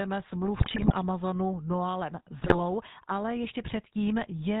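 From start to finish the speech carries the plainly audible roughness of the GSM full-rate codec, which fits 13 kbps. The vocal tract is modelled and driven by sparse, regularly spaced pulses, giving a buzzy, gravelly texture, and nothing passes above 4 kHz. Unlike burst damage, this is steady throughout.

GSM bit errors break in from 0.58 to 0.96 s and again from 2.4 to 2.56 s. Corrupted filter, pitch or gain values bend the spectrum or push the level up, frame after frame, so the speech squawks, pops and gargles only within these stretches, not everywhere.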